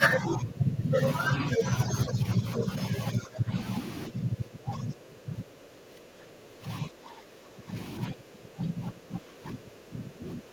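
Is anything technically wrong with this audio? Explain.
Yes. Speech suppressed in double talk, at 0.0–1.01 s, 1.34–1.65 s, 1.85–2.67 s, 3.13–3.54 s, 4.09–6.68 s, 6.86–7.77 s and 8.09 s to the end. This is likely an echo canceller that couldn't separate the near talker from loudspeaker echo while both sides spoke, so it attenuated everything. The speech dips and thins: shallow drops of a few dB around 1.3–2.7 s, and much deeper ones of about 15–20 dB elsewhere, with the longest stretch from about 4 to nearly 7 s.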